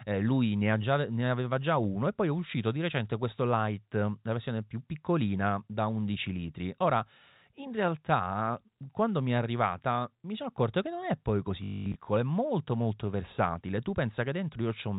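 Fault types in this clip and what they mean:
Packet loss with last packet repeated: from 11.64 to 11.96 s, just after "che non è poi" and before "è molto molto versatile", about 280 ms of audio goes missing across that 320 ms stretch. The receiver fills each gap by replaying the last packet it got. The longest run lasts 220 ms and buzzes at around 50 Hz, which fits 20 ms packets. The result is a robotic stutter within the telephone-band, 4 kHz-limited G.711 sound.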